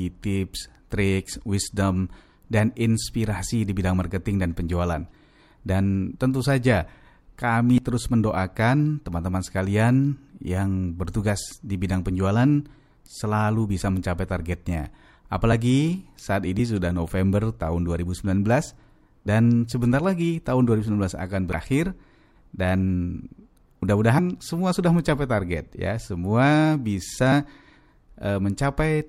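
At 7.76–7.78 s, just before "terus mendoakan", the speech jumps forward by roughly 70 ms. Skips of about 50 ms follow at 19.25 s (before "sebentar lagi tahun") and at 24.17 s (before "semua sudah mencapai"), with another of about 70 ms at 21.53 s. This is compressed frames skipped: whole coded frames were lost or rejected, so the audio leaps ahead.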